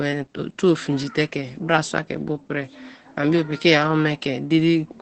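From start to finish the speech carries Opus voice compression, and the damage is plainly audible. The codec is running in its SILK linear-prediction mode at wideband, so there's basically nothing above 8.6 kHz, which takes the air and crispness off the top. With so few bits for the excitation the voice comes out a bit muffled, hoarse and faintly robotic, the kind of coarseness that fits a bitrate around 12 kbps.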